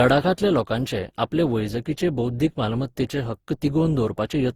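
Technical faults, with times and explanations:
Throughout, generation loss: the speech sounds swirly, smeared and hollow, with blurred consonant onsets. The likely cause is lossy re-encoding repeated about fifteen times, with each pass quantising again on a shifted frame grid so that noise piles up. The character fits repeated Opus coding at around 64 kbit/s. What separates it from a single low-bitrate encode is that the bandwidth still reaches about 20.1 kHz, yet the damage is worse than that rate alone would cause.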